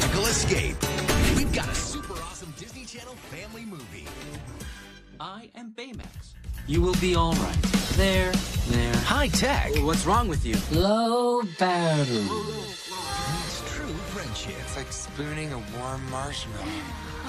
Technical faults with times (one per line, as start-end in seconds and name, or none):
1.28-2.47 zipper noise
6.31-6.83 zipper noise
12.12-12.46 zipper noise